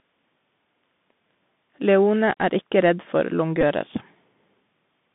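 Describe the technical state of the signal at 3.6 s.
At 3.61 to 3.63 s there is a Bluetooth headset packet repeat. About 15 ms of voice data went missing on the link, which fits four consecutive 3.75 ms packets. The chip filled the gap by decoding the last good packet's bits over again. Four repeats in a row sound like a brief buzz near 267 Hz, the packet repetition rate, and it ends as soon as valid packets resume.

Underneath it, and throughout, is the Bluetooth CVSD headset codec. The line passes roughly 150 Hz to 3.6 kHz, and nothing above that survives. The one-bit delta coding, consistent with a 64 kbit/s CVSD link, is plainly audible. Its adaptive step cannot keep up with loud, bright content, so sibilants come out scratchy and a granular hiss sits under the speech.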